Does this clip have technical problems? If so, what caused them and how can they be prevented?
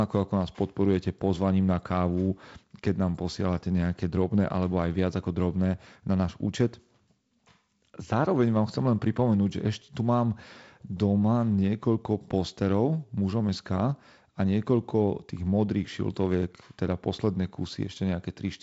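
No, there are no technical problems to report here.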